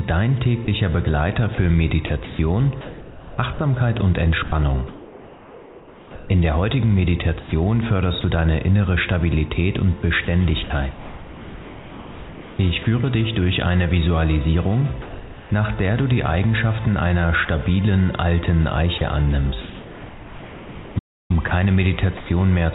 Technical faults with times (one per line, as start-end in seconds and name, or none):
0.00-22.74 timecode bleed
0.65-8.24 sound chopped by the voice detector
10.25-12.86 sound chopped by the voice detector
15.02-15.50 sound dropped by the voice detector
17.45-17.48 sound dropped by the voice detector
18.98-22.74 sound chopped by the voice detector
20.98-21.31 playback stall